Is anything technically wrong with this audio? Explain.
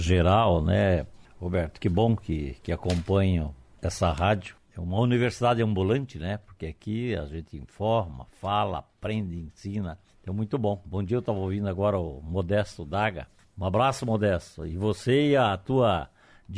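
No, nothing is technically wrong with this audio.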